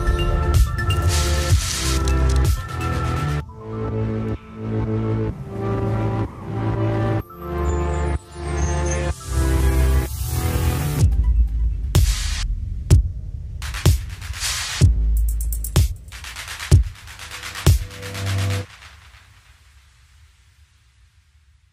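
Nothing to report: no faults are audible at any point in the audio.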